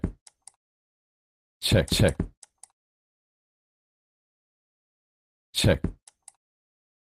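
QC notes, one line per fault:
Nothing stood out on listening.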